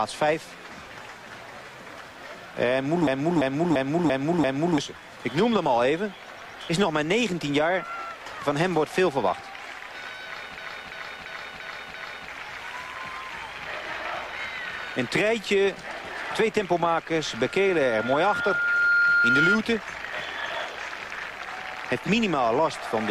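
A system hang loop hits from 3.07 to 4.78 s and again from 10.58 to 12.29 s. The playback froze while the hardware kept replaying its ring buffer, so a 341 ms slice repeats five times at about 2.9 per second. That is a machine-gun stutter that fits a 16384-sample buffer, and roughly a second and a half of audio is lost each time.

A loudspeaker feedback squeal runs from 17.19 to 19.59 s. The microphone picked up its own loudspeaker, and at 1.4 kHz the loop gain went past one. That single tone swells over about a second and a half into a whistle about 5 dB louder than the program.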